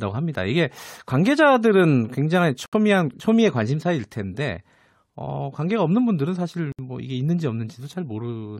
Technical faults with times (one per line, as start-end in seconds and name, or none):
2.66-2.73 gap between stream segments
6.72-6.79 gap between stream segments